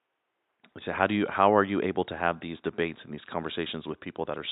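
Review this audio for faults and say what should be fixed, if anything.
No faults; nothing needs fixing.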